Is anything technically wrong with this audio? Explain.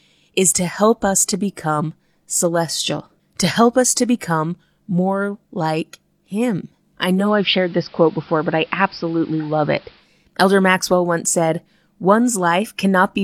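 Yes. From 7.15 s to 10.10 s there is digital radio blending to analogue: the receiver lost the digital stream and cross-faded over about 0.19 s to the station's AM broadcast, then back. AM's narrow bandwidth dulls the sound, hiss sits roughly 30 dB below the signal, and the level holds steady.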